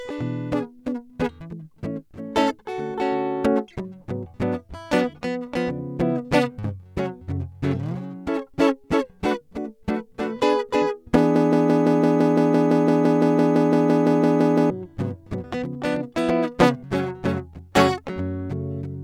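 From 11.36 to 14.70 s, playback has likely stalled and keeps resending its last 0.17 s fragment. This broken-record loop makes the music stutter on one identical slice twenty times back to back, and the music due in that span is lost.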